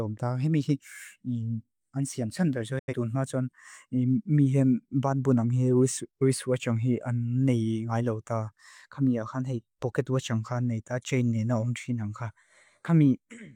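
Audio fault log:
2.79–2.94 s, digital broadcast dropout: the speech fades to silence in 8 ms as the receiver mutes, and 85.3 ms of programme is lost. That points to a couple of corrupted frames failing their checks, and the sound picks up mid-flow once good frames return.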